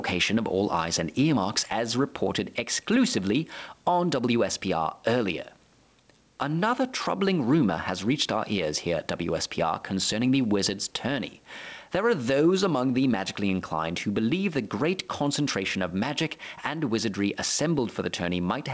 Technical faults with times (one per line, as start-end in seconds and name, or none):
0.00-18.74 gain pumping